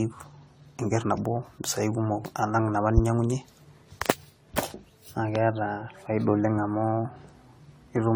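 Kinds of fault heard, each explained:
Generation loss: The speech sounds swirly, hollow and smeared throughout, with softened consonant attacks, more damage than one pass at a modest bitrate would cause. This likely comes from about seven repeated AAC-LC encodes near 64 kbit/s, each re-quantising on a shifted frame grid.
Loud pop: A single sharp pop from 5.35 to 5.39 s stands out about 15 dB above the speech, which continues unbroken underneath. That continuity distinguishes it from a dropout or an edit. It is likely a voltage pulse from a switch, plug, static or driver glitch.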